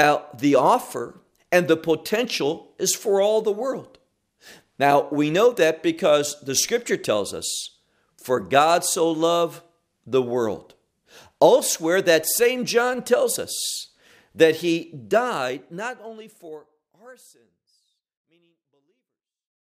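No faults found; the speech eases out in a smooth, editor-style fade beginning around 15 s and running to the end.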